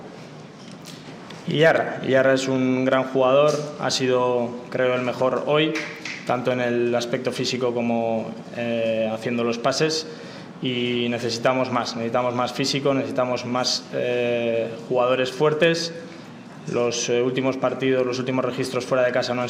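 Brief hard clipping hits peaks at 1.63–1.71, 2.93–2.97, 11.46–11.49 and 15.63 s, overdriven about 1–3 dB. The flat-topped waveform gives a sharp crackle rather than soft saturation's rounded warmth.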